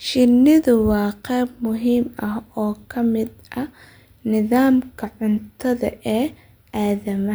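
No technical faults can be heard anywhere in this speech recording. There is no event in its timeline that needs to be placed or explained.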